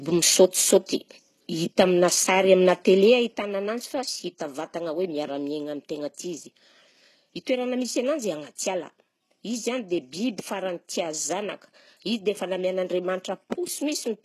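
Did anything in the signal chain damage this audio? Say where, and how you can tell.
Yes. HE-AAC compression runs through the whole clip and likely comes from the codec stage. The speech has no content above 12.3 kHz, and the treble below that edge sounds synthetic. Sibilants come out gritty and metallic, because the upper band is copied up from lower frequencies and shaped only coarsely, so its harmonics don't line up with the real ones. The damage is plainly audible, which fits a very low bitrate of around 16 kbps.

Zipper noise appears from 3.01 to 3.45 s, while the level drops by roughly 10 dB. The fade is applied in discrete jumps, about a hundred a second, with no smoothing between them. Each jump leaves a small click, and together they make a fine ticking that rides on the speech until the level settles. This points to gain being updated once per processing buffer in the driver or call-processing stage.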